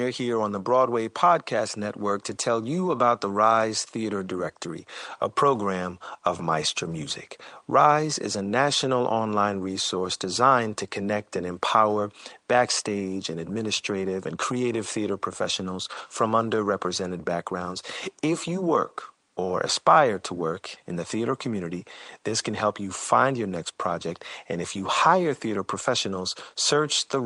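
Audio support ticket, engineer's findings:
No fault found in the signal path.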